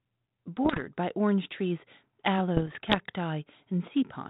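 A speech recording carried over 32 kbit/s G.726 ADPCM, whose light band-limiting is audible, shows bit errors on an ADPCM link in two bursts: 0.65 to 0.82 s, just before "by orange trees", and a longer one from 2.57 to 2.95 s. Each flipped bit throws off the decoder's step size and predictor, so a pop trails into rough, uneven level wobbles. The first burst has the higher error rate, near one percent against roughly half that later. Unlike packet loss, nothing drops out or gets smoothed over.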